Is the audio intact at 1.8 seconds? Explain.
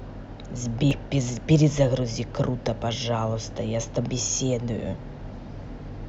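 Yes, at 1.8 seconds the speech plays through intact with no audible fault.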